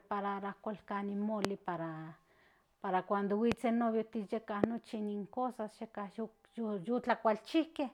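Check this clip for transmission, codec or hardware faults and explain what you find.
There's one kind of fault here: three loud pops, at 1.45–1.47 s, at 3.52–3.54 s right after "para cuando", and at 4.64–4.66 s just before "in cosas". Each is a single sharp pop, about 25, 20 and 25 dB over the speech, which carries on underneath. A sudden voltage spike from a connector, switch or static discharge is the likely cause.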